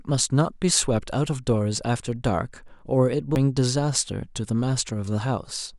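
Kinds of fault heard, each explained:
CD skip: at 3.35 s the speech breaks with a tick and a mute of only a few milliseconds, then resumes from a different point. A knock or a flaw in the disc threw the laser off its track onto another turn of the spiral. The player briefly silences its output while it relocks, then carries on reading from wherever the laser landed, so the speech jumps instead of continuing smoothly.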